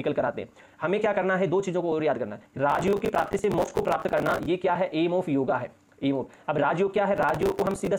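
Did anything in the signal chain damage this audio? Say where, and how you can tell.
Yes. The damage happens at the driver or buffer stage. Processor overload crackle runs from 2.70 to 4.46 s, then again from 7.17 to 7.87 s. Both stretches carry a gritty, tearing crackle over the sound, and it stops cleanly when each one ends. The grain points to buffers of about 10 ms missing their deadlines in rapid succession. Each late buffer replays stale audio with hard edges, so the many small discontinuities merge into a continuous crackle.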